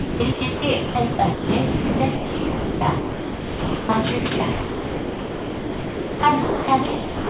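Sound chopped by the voice detector, from 0.0 to 3.89 s and again from 4.19 to 7.30 s: the sound cuts in and out, with about 2.5 s of each stretch replaced by comfort noise, likely from a sender-side detector repeatedly stopping transmission.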